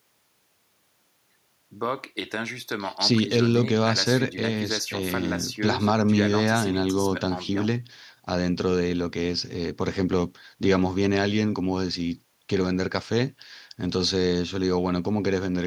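No technical faults are audible.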